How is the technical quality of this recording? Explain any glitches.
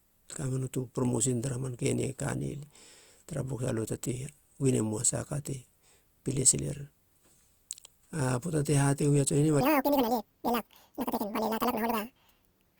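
The recording has one clear fault near the end. A section at the wrong speed runs from 9.61 s to the close of the clip at 12.80 s. That stretch plays 1.89 times faster than normal, most likely because it was played back or conformed against the wrong clock rate. Because speed and pitch are tied together, the speech there jumps up by about ten semitones and sounds squeaky and rushed, clearly out of step with the part before it.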